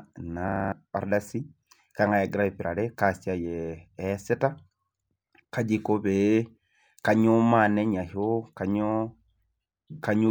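From 0.48 to 0.72 s a system hang loop hits: the computer or driver froze while a 40 ms buffer replayed six times, giving a 25 Hz stutter and losing about a fifth of a second of speech.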